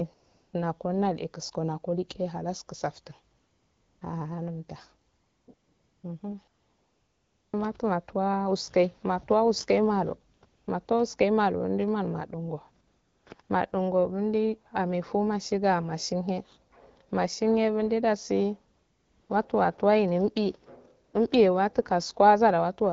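AMR comfort noise appears twelve times between 0.13 s and 21.13 s, with gaps from 20 ms to about 1.06 s. The longest, 6.47 to 7.53 s, ends just before "matu matuwa uske matuwa". In each, the sender judged the talker silent and stopped sending speech frames, so the receiver filled in a smooth, steady synthetic hiss that replaces the real background and switches in and out abruptly. This runs over AMR-WB speech whose clarity fits a 12.65 kbit/s rate.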